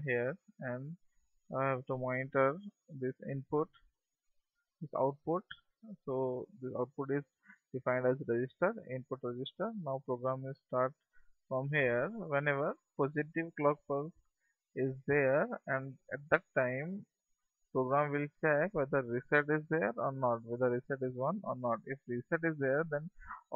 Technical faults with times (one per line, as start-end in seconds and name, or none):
none